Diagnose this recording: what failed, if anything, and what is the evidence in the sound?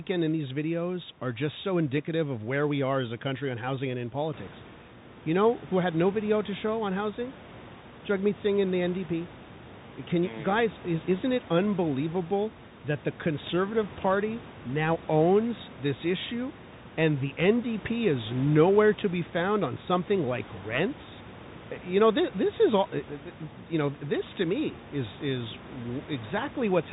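The failure is at the codec stage, a Bluetooth CVSD headset codec, across the whole recording. Nothing reaches above 4 kHz, so the speech sounds narrow and boxy. S sounds turn scratchy. Loud, bright syllables distort where the one-bit step cannot climb fast enough. A granular hiss sits under the speech. That points to a 64 kbps CVSD stream. The room noise rises by about 12 dB around 4.5 s, but that belongs to the room, not the system.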